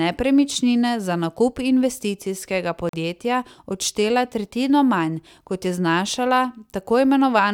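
A speech recording with one short break in the sound. From 2.89 to 2.93 s, the audio drops to silence for about 43 ms, then picks up again. When the sound returns, it does not resume where it stopped. It continues as if it had kept playing through the gap, so that stretch is simply missing. This is likely a Bluetooth dropout. Audio packets failed to reach the headphones in time and were discarded. A gap of this length fits about two lost packets.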